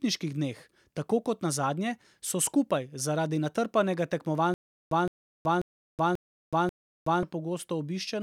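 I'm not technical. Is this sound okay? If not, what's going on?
No. From 4.54 s to 7.23 s the speech breaks into a stutter with silent gaps. A short burst of about 165 ms plays, then about 373 ms of complete silence follows, and the same burst comes back five times at a steady pace of roughly every 0.54 s. This is likely a playback or streaming stall: each retry replayed the last fragment and then ran out. The speech that belonged in those gaps is missing.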